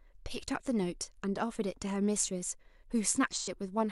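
From 3.34 to 3.49 s the speech shows AAC frame loss with concealment. Roughly 85 ms of coded audio is missing, which fits two lost frames, and the decoder rebuilt the gap from the last good spectrum, producing a brief smeared, noisy, phasey patch.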